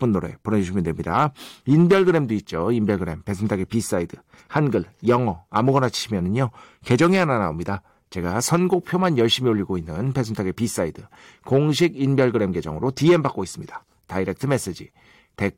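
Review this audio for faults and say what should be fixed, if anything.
No faults can be heard anywhere in the speech recording. There is nothing here that needs fixing.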